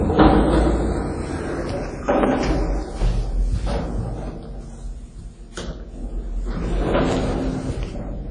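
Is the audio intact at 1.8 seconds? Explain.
No. WMA compression damage is plainly audible throughout, including at 1.8 s, and is likely from WMA encoding at a low bitrate around 32 kbps. Long transform blocks smear quantisation noise over tens of milliseconds and weak components are zeroed, leaving nothing above 10.1 kHz and a ringing, washy sound with breathing hiss.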